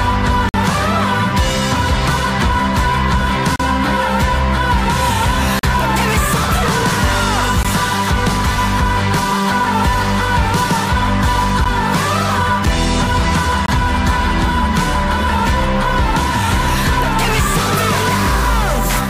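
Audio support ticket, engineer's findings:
Gap between stream segments: hard-edged silent holes at 0.49–0.54, 3.56–3.60, 5.59–5.63, 7.63, 9.64, 11.64, 12.65, 13.66–13.68 s. Segment timestamps don't quite meet, so the player pads with silence. Spacing fits 1 s segments.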